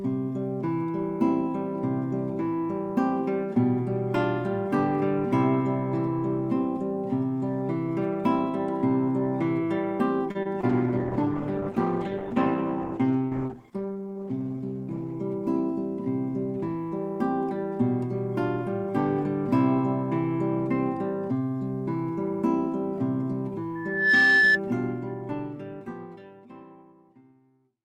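The audio has a cluster of network faults around 10.3 s, then an acoustic one later. At 10.31 to 10.37 s there is a short stall from a late packet. A packet arrived late and the jitter buffer ran dry. The receiver held the last sound for 35 ms, then resumed where it stopped. Nothing is lost, but that moment drags briefly with a slight buzz or dip. Two short concealed packet losses follow, at 10.43 s and 10.61 s. Each time, 20 ms of audio never reached the decoder. The receiver extended the preceding sound to cover the gap and blended back in. Each shows up as a tiny smear or wobble. A call bitrate drop runs from 10.7 to 15.23 s. The bandwidth estimate fell and the encoder went from 32 kbps down to 12 kbps, staying at the low rate for 4.5 s. The coarser coding makes the sound rough and watery, and the top end is cut, so it turns muffled until the rate recovers. Inside that stretch, from 13.74 to 14.03 s, comes a jitter buffer speed-up. 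The buffer had built up surplus delay. To shed it, the receiver trimmed small pitch-period slices, about 40 ms in total. Playback ran at 113 percent with unchanged pitch, so that part sounds hurried. From 23.75 to 24.6 s there is a loudspeaker feedback squeal. A microphone picked up its own loudspeaker, and the loop gain passed one at 1.7 kHz. That tone grows over roughly 0.4 s into a squeal about 10 dB above the rest of the sound before it stops.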